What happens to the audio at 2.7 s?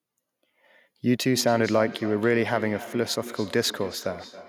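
At 2.7 s the speech is inside a feedback echo between two devices, running from 1.25 s to the end. A second device replays this microphone's signal, which is picked up again, so each word returns roughly every 0.3 s, thinner and ringing, at about 14 dB below the speech.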